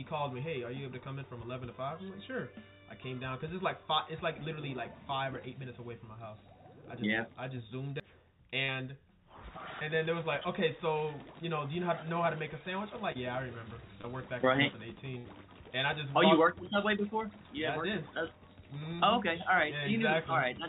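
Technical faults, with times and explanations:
8.00 s, CD skip: A tick and a near-instant dropout, a mute of only a few milliseconds, after which the sound carries on from a different point rather than where it left off. A knock or a flaw on the disc threw the laser onto another turn of its spiral, so the player muted briefly and resumed reading from a different turn. The join is audibly out of place.
8.64 to 8.70 s, 13.12 to 13.17 s, 14.01 to 14.06 s, short concealed packet loss: Each is a brief smear or wobble. In these call-path moments, 40 ms of audio at the first and 20 ms at the other two never reached the decoder in time. The receiver covered each hole by extending the preceding sound for 40, 28 and 26 ms respectively, then blended back into the real stream.
15.18 to 15.26 s, burst of packet loss: A held, fading tail of the previous sound, then an abrupt resumption slightly further on. 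About 60 ms of consecutive audio was lost or arrived too late to play, so the receiver stretched the last sound for 64 ms, lowering its level as the gap went on, before real audio resumed. Through the G.711 mu-law call path that carries the clip, with nothing above 4 kHz, the filled stretch is band-limited like the rest of the call.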